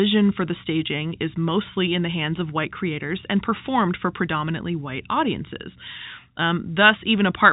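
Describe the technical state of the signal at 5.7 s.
At 5.7 s the speech is intact, with no dropout, click or distortion, only the narrow telephone band of G.711 coding with nothing above about 3.8 kHz.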